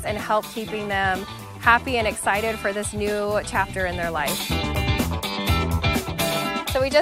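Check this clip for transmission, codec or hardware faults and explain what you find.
No transmission, codec or hardware faults can be heard; the audio stays continuous and stable throughout, with nothing in it that points to a problem anywhere along the signal path.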